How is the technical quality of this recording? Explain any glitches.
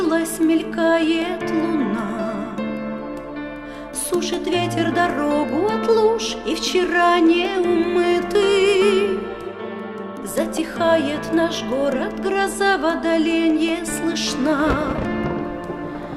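Nothing in the recording stands out as a glitch, so there's really nothing here to explain.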